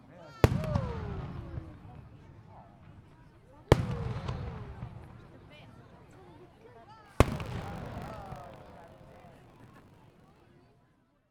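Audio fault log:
7.04–10.40 s, buffer tearing: over these three-odd seconds a steady 50 Hz rattle rides on the sound, and it's only there while something is actually sounding. The writer and the hardware read pointer have slipped and now cross inside every period, so a small slice of each buffer, somewhere around 7%, still holds audio from roughly 40 ms earlier. The hard joins on either side repeat every 20 ms, which points to a buffer period of about that length and gives the robotic buzz.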